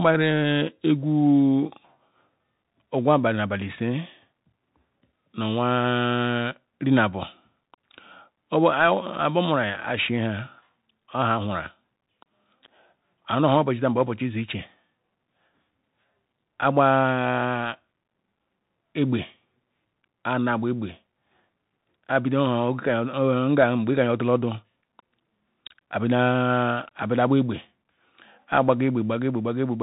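Throughout, the speech runs through a Bluetooth CVSD headset codec: it's cut off at 3.8 kHz, and one-bit step tracking leaves scratchy s sounds and grainy hiss.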